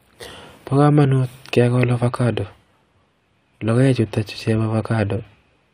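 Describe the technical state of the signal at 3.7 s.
At 3.7 s the speech signal is intact, with no technical fault audible at that moment.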